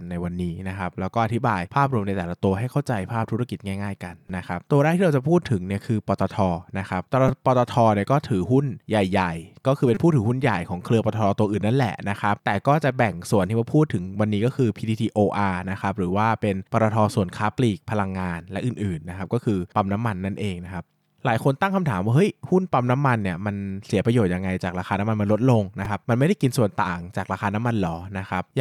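Repeated buffer faults interrupt this speech clip at 4.28 s, 7.28 s, 9.95–9.97 s and 25.85 s. Each is a brief buzzy click where playback ran short of new audio and re-played one tiny piece, a size that fits a buffer of about 5 ms, so roughly 10–20 ms of speech goes missing.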